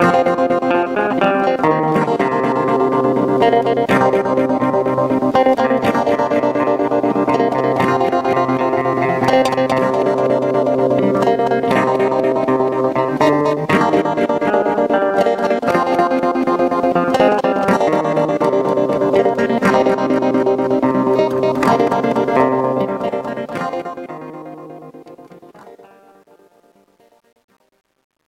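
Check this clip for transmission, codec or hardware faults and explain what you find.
One fault is present: truncation distortion on a fade, from 22.53 s to the end at 28.29 s. The fade is computed without dither at a resolution that fits about 10 bits, so the decaying sound turns gritty and stepped, worst from 24.88 s onward.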